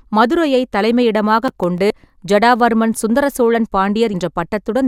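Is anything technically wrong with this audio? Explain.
Yes. The speech has two kinds of fault.

From 1.48 to 1.78 s there is processor overload crackle. The processor misses its deadlines for a run of small audio buffers, and each missed buffer drops out as a short stretch of silence with hard edges. The pattern fits buffers of about 5 ms, with several of them missed across those 0.3 s. You hear it as a gritty crackle over the speech that clears once the load eases.

There are two cases of compressed frames skipped. The first is at 1.90 s, just before "ஜடாவர்மன் சுந்தர சோழன்". The second is at 4.13 s, just after "ஜடாவர்மன் சுந்தர சோழன்". In each case whole compressed frames are never decoded, so playback jumps forward. The first jump is about 70 ms and the second about 100 ms, which fits three and four frames of 24 ms.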